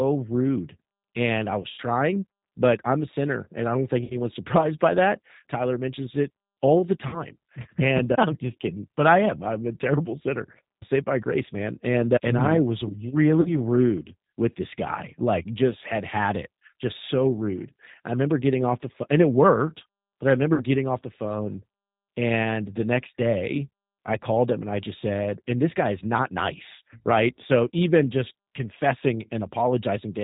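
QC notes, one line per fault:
Throughout: G.729 codec, plainly audible; speech comes out rough and synthetic, with nothing above 4 kHz, which points to G.729A at 8 kbit/s.
1.62 to 1.80 s, after "rude and i": VoIP packet loss concealed by the speech codec; about 100 ms lost across 160 ms, with the decoder stretching the last sound into a buzzy or noisy fade.
4.04 to 4.19 s, after "and i don't think": same packet loss concealment, about 60 ms lost, with sound smeared and weakened until the decoder recovers.
7.07 to 7.23 s, between "mentions it all the" and "and uh": packet loss concealment again, about 60 ms gone, with extrapolated sound fading out.
13.42 to 13.54 s: packet loss concealment, about 40 ms lost, brief stretched sound.
20.54 to 20.64 s: packet loss concealment, about 60 ms lost, with the decoder filling the gap and sound staying weak briefly afterwards.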